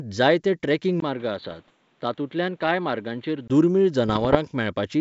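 Right after "जायते ट्रेकिंग", at 1.00 s, the sound drops out for about 20 ms and comes back dull and boxy, with nothing above 4.5 kHz, a faint new background hiss and a level about 5 dB lower. It stays that way until 3.50 s, when the full brightness returns. The likely cause is an input switched to a poorer device: the recording moved to a narrower-band microphone or headset profile with its own noise and gain, then switched back.

From 1.45 to 1.70 s, inside that dull stretch, and again from 4.09 to 4.37 s, the sound breaks into pops and rough, gritty bursts with brief jumps in loudness. The second burst is harsher. These are bit errors on an ADPCM link. The G.722 wideband telephone coding carrying the audio is clean elsewhere. Each flipped bit throws off the decoder's step size and prediction, so every error smears into several milliseconds of distortion. The errors are sparse, well under one percent of bits.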